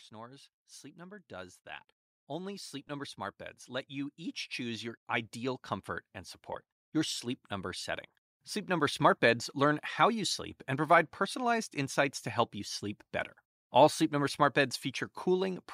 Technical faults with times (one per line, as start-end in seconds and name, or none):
0.10-5.69 automatic gain rising
2.88 lost LE Audio frames
6.53 lost LE Audio frames
6.92-9.06 automatic gain rising